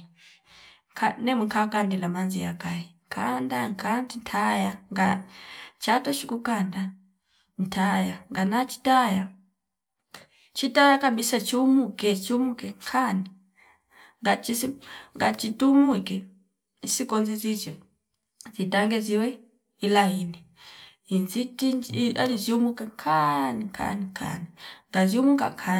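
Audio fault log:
No faults heard anywhere in this speech recording.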